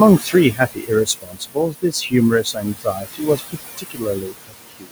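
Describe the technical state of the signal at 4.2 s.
At 4.2 s, speech is cut by the noise suppressor, from 3.77 s to the end. The suppressor mistook speech for noise and pulled it down by up to about 22 dB. Roughly 0.7 s sounds swallowed and faint. Noise suppressor artifacts are also present here. The room noise sits about 10 dB below the speech and is cut by about 16 dB.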